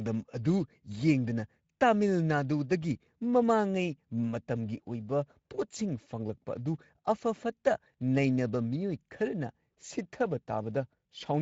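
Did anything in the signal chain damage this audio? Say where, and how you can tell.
Yes, the codec stage. Across the whole clip the speech has the hoarse, noisy edge of Speex codec coding, which fits a rate of about 16.8 kbps. At that rate the CELP excitation gets too few bits to track the voice cleanly, and that shortfall is plainly audible.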